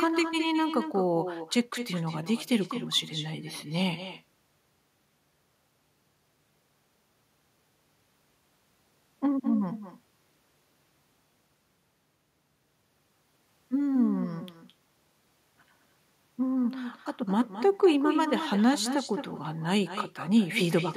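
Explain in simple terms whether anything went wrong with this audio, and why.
Yes, something went wrong. All the way through this speech clip, every phrase is followed a moment later, about a fifth of a second, by a fainter, thinner copy of itself. That's echo with no canceller: the person on the other end had the call on a loudspeaker, their microphone picked it up, and nothing stripped it out, so the talker's own voice travelled back down the line.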